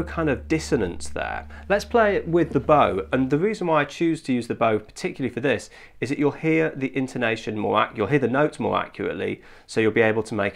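Nothing here goes wrong at any point; the sound runs along from the first moment to the last without a single technical fault to point to.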